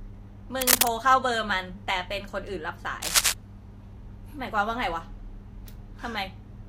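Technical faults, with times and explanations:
0.61–0.88 s and 3.02–3.33 s, cable scratch noise: a worn cable or connector was likely shifted, its contact resistance fluctuating rapidly, laying dense, ragged bursts of scratching over the speech, about 10 dB above it in the first burst and about 5 dB above it in the second.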